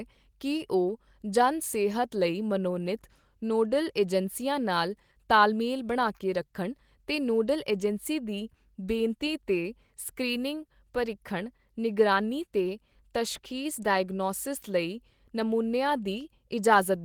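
No technical faults can be heard anywhere in this speech.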